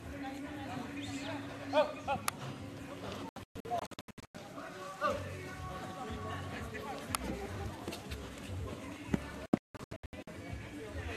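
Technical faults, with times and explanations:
3.29–4.35 s, digital broadcast dropout. The receiver lost good frames and muted. Roughly 0.62 s vanishes in short holes, the longest 0.12 s.
7.55–8.00 s, processor overload crackle. The processor missed around ten very short buffer deadlines. Each skipped buffer leaves a hard-edged gap, heard together as gritty crackle.
9.46–10.28 s, digital broadcast dropout. Signal was lost again and the audio muted. About 0.53 s disappears in scattered holes, the longest 0.17 s.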